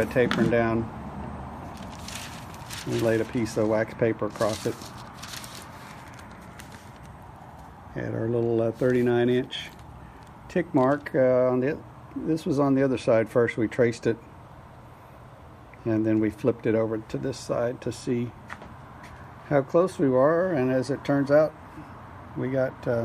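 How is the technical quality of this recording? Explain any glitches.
No technical faults are audible.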